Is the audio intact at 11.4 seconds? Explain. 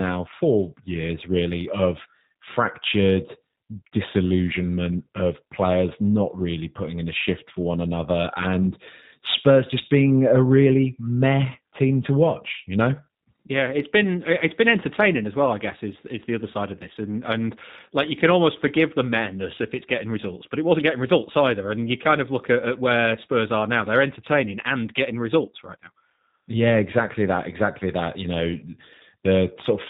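No. At 11.4 seconds, as throughout the clip, the speech has passed through a G.729 codec, and the damage is plainly audible. The codec discards the waveform and rebuilds each 10 ms frame from a vocal-tract filter, a pitch predictor and a few coded pulses, at a rate that fits 8 kbit/s. Everything above 4 kHz is missing, so the speech sounds muffled, and the voice comes across rough and slightly synthetic.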